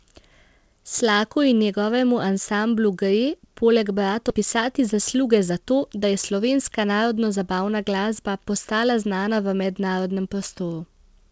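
At 4.30 to 4.32 s, right after "njegovemu ansamblu gre poleg", a skip ahead occurs: roughly a second of speech is dropped while later audio was already queued, so playback jumps forward with no silence or filler and the two sides are butted almost directly together. Unlike a dropout or packet-loss concealment, there is no gap, fade or smeared fill. The speech simply lurches onward, missing material, and the delay shrinks by about the same second.

From 4.62 to 6.87 s, ending just before "narodnozabavna glasba postala", the jitter buffer speed-up trims its excess backlog by repeatedly cutting out short pitch-period-sized pieces, about 150 ms in total. The speech runs at about 107% speed and sounds hurried, yet the pitch stays where it was. That unchanged pitch separates it from a resampling or clock-rate error, and the gradual, spread-out removal separates it from the single abrupt skip just before. 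The G.722 call codec at 64 kbps carries nothing above 8 kHz throughout.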